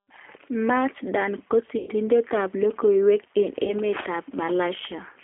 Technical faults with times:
0.00-5.23 G.729 codec
1.78-1.90 VoIP packet loss concealed by the speech codec
3.64-3.73 VoIP packet loss concealed by the speech codec

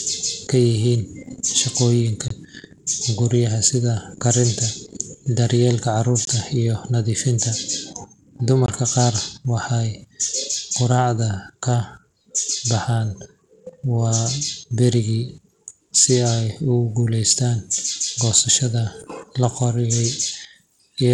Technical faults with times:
0.00-21.14 Bluetooth SBC compression
2.28-2.30 block of digital silence
6.25-6.27 block of digital silence
8.66-8.68 block of digital silence

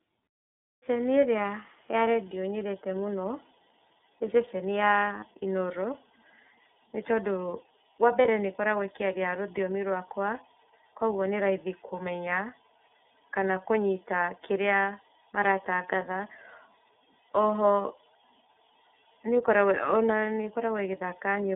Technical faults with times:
0.00-21.55 iLBC codec
8.22-8.25 lost iLBC frames
17.82-17.85 lost iLBC frames

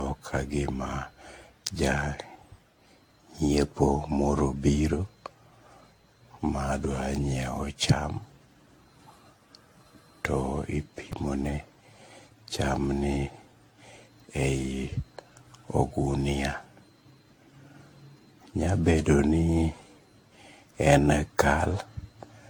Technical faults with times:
0.00-22.50 generation loss
11.12 repeated buffer

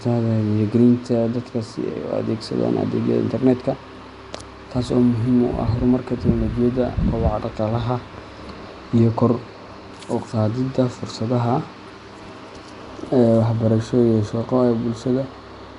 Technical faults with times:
0.00-15.79 Nellymoser compression

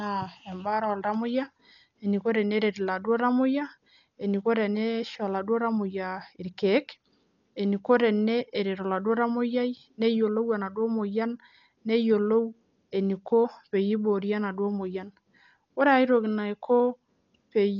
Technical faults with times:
0.00-17.79 Dolby Digital compression

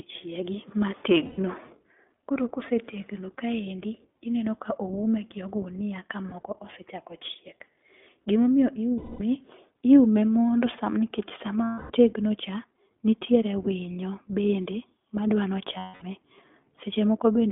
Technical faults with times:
0.00-17.52 iLBC codec
1.26-1.40 lost iLBC frames
6.30-6.33 lost iLBC frames
8.98-9.21 lost iLBC frames
11.64-11.92 lost iLBC frames
15.78-16.04 lost iLBC frames

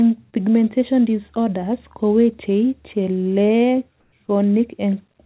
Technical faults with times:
0.30-0.37 short concealed packet loss
4.00-4.12 comfort noise in place of the background

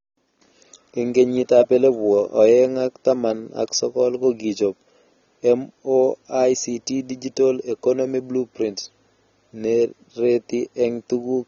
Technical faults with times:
0.00-11.48 AAC compression

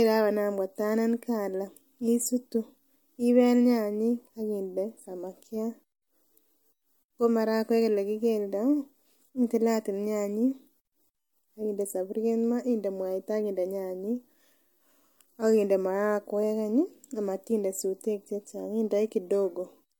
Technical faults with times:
0.00-19.99 transcoding between lossy codecs

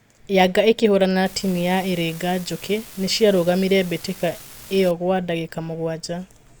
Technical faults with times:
1.26-4.91 unreliable data bit

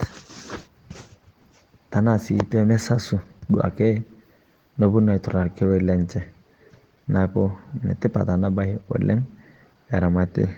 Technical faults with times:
0.00-10.58 Opus voice compression

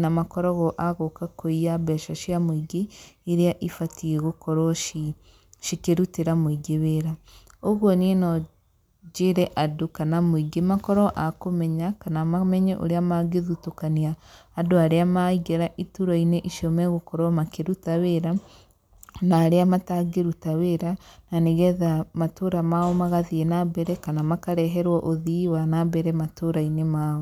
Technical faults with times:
none

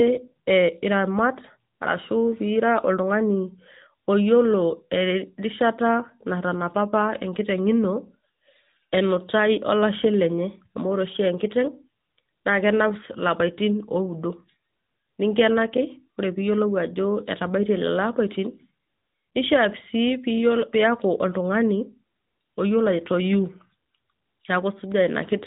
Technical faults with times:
0.00-25.47 AMR narrowband mobile codec
15.77 block of digital silence

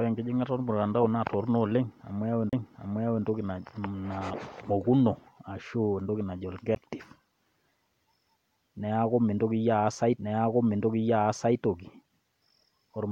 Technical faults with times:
2.49-2.53 CD skip
6.75 CD skip
10.17 CD skip

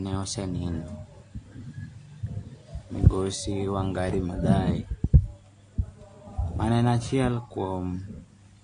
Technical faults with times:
0.00-8.63 AAC compression

